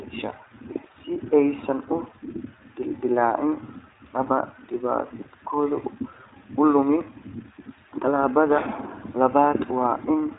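From start to finish, the speech carries the sound of the iLBC codec. Nothing above about 3.8 kHz survives, so the audio sounds narrowband and telephone-like, with sibilants dulled. The coding damage is plainly audible. Each short frame's excitation is coded on its own, here in what sounds like 20 ms blocks. The result is a slightly rough, synthetic edge on the speech. The roughness and bandwidth point to a rate near 15 kbps.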